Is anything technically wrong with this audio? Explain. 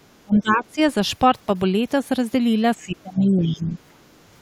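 Yes. Two echo-cancellation faults appear.

From 0.22 to 0.8 s and from 2.77 to 3.79 s, there is speech suppressed in double talk. The speech sinks by as much as about 20 dB, thinning and breaking up. Likely cause: the canceller mistook overlapping talk for echo and ducked everything.

The other side's voice leaks through from 0.34 to 0.41 s and from 3.48 to 3.6 s. It is a faint scrap, about 20 dB and then about 25 dB below the speech. Loudspeaker pickup was likely left uncancelled in the microphone signal.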